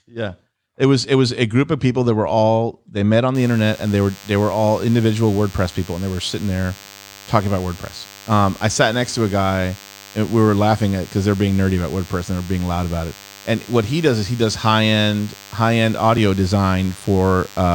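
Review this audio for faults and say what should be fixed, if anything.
A DECT cordless phone buzz starts at 3.35 s, just after "all they met on", and runs to the end of the recording at 17.75 s. It is a thin, steady buzz at 100 Hz with a dense stack of harmonics, sitting roughly 25 dB below the speech. A nearby DECT handset or base sends a radio burst every 10 ms, and the audio input rectifies it into this tone. Keep DECT equipment well away from the microphone, cable and interface, and use shielded, balanced cabling.

At 16.18 s there is a small forward jump in the sound, losing a few milliseconds of material with no gap of silence. The likely cause is a dropped buffer (overrun): the recording software failed to read a block of samples before the hardware overwrote it, so the audio on either side was spliced directly together. Prevent it by increasing the buffer size and reducing CPU load or competing processes during capture.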